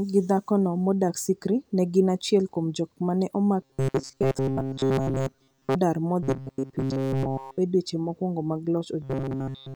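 Speech with robotic sound from repeated short buffers at 3.62–5.76 s, 6.23–7.58 s and 9.02–9.76 s: a rigid 134 Hz metallic buzz, likely from a roughly 7.5 ms block being looped over most of the audio (all of it in the last stretch), shows as evenly spaced 134 Hz harmonic lines on a spectrogram and as identical repeating cycles in the waveform.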